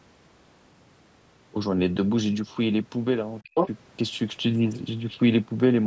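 A speech recording in which the echo canceller briefly lost control during overlapping talk. From 3.44 to 3.57 s there is speech suppressed in double talk: the canceller likely mistook the talker for loudspeaker echo and clamped down, cutting the voice by roughly 40 dB for a moment. Overlapping its end, from 3.54 to 3.69 s, the other side's voice leaks through, with uncancelled loudspeaker echo, likely left over as the canceller readapted, coming through at about the talker's own level.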